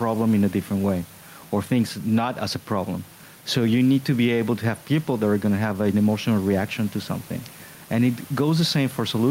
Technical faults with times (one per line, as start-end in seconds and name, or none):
0.00-9.31 gain pumping